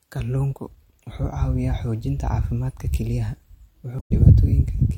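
At 3.96 to 4.12 s, damaged data in the compressed stream briefly disrupts the speech. The decoder loses frame sync, then recovers.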